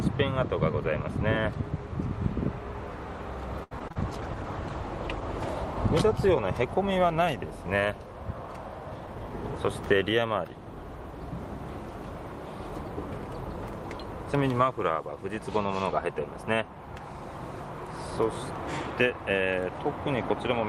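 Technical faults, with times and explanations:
3.63 to 3.97 s, repeated packet loss (robotic sound). Four gaps fall within about a third of a second, the longest lasting 76 ms. The receiver fills 140 ms by extending the last sound it had. Another 80 ms is simply absent. About 41% of this span is patched rather than real. The repeated patching and the missing pieces make the sound choppy, stuttering and dropping out.
4.03 to 6.32 s, call bitrate drop. The encoder's rate falls from 32 kbps to 13 kbps and stays at the lowest level for 1.21 s. With fewer bits, detail is coded coarsely. At this low rate the top of the spectrum is also removed. The sound turns muffled and watery, with rough texture, until the rate climbs back near 6.3 s.
9.00 to 9.41 s, jitter buffer speed-up. The receiver holds more audio than it wants, so it trims about 50 ms from this stretch. It does this by cutting tiny pitch-length slices many times in a row. 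Playback runs at about 111% speed while the pitch stays the same. The passage sounds hurried and compressed in time.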